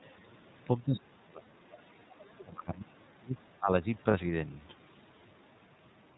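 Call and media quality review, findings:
iLBC codec, whole clip. Speech band-limited to 4 kHz, slightly rough and synthetic in texture. Codec damage plainly audible. Fits the 13.33 kbps mode with 30 ms frames, each coded independently. Low-bass roll-off from the call microphone processing's high-pass is normal.

Speech suppressed in double talk, 0.83–3.02 s and 3.18–3.85 s. Level dips by up to about 30 dB. Roughly 2 s affected in the first span, under half a second in the second. Likely cause: the echo canceller mistaking overlapping talk for loudspeaker echo and attenuating both.

Lost iLBC frames, 1.43–1.48 s and 4.11–4.14 s. Short held, slightly buzzy or breathy vowel-like fill, 30 ms each, consistent with one missing frame per event. The decoder repeats the last pitch cycle with added noise. Speech recovers almost immediately because frames decode independently.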